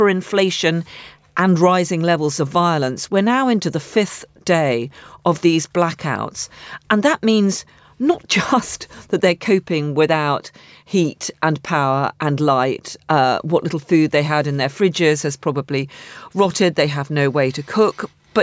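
Nothing goes wrong anywhere along the way here; the speech just carries on from beginning to end without a single technical fault turning up.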